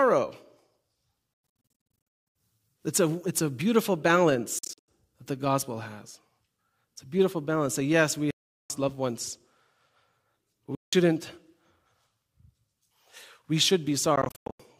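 Speech here, and it keeps cutting out in the way you'd get from a likely Bluetooth dropout, with packets missing the headphones and the output going silent. The holes sit at 1.34–2.36 s (broken up, about 0.73 s lost), 4.59–4.88 s just before "that the gospel has", 8.31–8.70 s between "yes we" and "loved ones", 10.75–10.93 s, and 14.16–14.60 s. The edges are abrupt or fade over a few milliseconds, and the speech picks up further along each time, as if it had kept playing.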